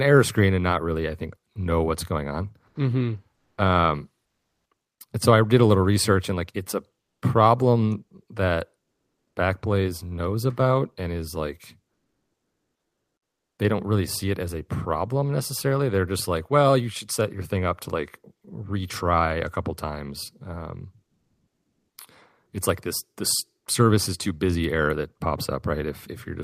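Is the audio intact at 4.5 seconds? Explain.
No. From 4.25 to 4.71 s, comfort noise replaces the background. The sender likely paused transmission during silence, and the receiver filled those 460 ms with steady synthetic noise at an unchanged level. Unlike a dropout, nothing goes silent; the background's texture simply flattens.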